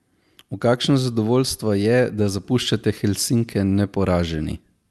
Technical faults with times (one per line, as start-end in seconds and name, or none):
0.00-4.90 clock drift between sender and receiver
0.00-4.84 repeated timing corrections